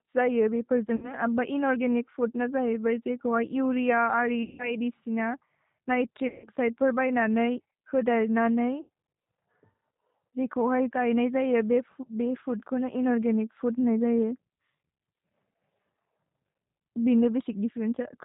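Rough, slightly synthetic speech with nothing above 4 kHz runs through the whole recording, plainly audible. This is the G.729 codec, a low-rate VoIP coder that rebuilds speech from a vocal tract filter, a pitch predictor and a few pulses per 10 ms frame rather than sending the waveform. The coarse character points to G.729A at 8 kbit/s.

At 0.96 s, right after "जये बेपोर्", the sound is stretched into a buzzy tone or a coloured noise that fades, for about 60 ms, and stays weak until 1.14 s. Similar dropouts follow at 4.43 to 4.79 s and 6.28 to 6.48 s, each covering about 160 ms, and at 8.81 to 8.89 s, covering about 80 ms. This is VoIP packet loss concealed by the speech codec. The decoder stretched its last pitch and filter and lowered the gain with each frame, and the damage lingers after audio resumes because each frame builds on the one before it.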